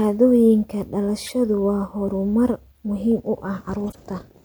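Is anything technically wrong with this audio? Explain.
Yes. Two stretches of corrupt frames were decoded. The first runs from 1.26 to 1.33 s, just before "waa horumar muhiim u". The second runs from 3.91 to 3.97 s, right after "waa horumar muhiim u". Each time, damaged bits in a few compressed frames were decoded anyway. The misread values put energy at the wrong frequencies. The result is a short chirp or burst of noise peaking around -20 dBFS.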